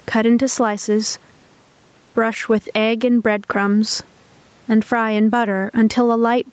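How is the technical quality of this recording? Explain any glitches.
The recording has one clear fault, gain pumping, present for the whole speech clip. The input gain is likely set far too high, so a fast limiter clamps down on each loud syllable. The gain swings by roughly 15 dB, which leaves the sound squashed. The top end stops at about 8 kHz, as the call path's bandwidth would produce.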